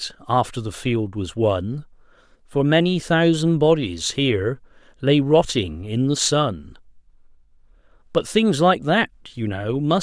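Nothing stood out on listening to this speech recording.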